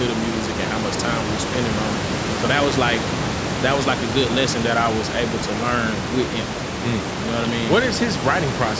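No technical faults in the speech; the call microphone processing limits content to 8 kHz and removes the lowest bass as designed, and the room noise sitting about 5 dB below the speech belongs to the recording environment, not the system.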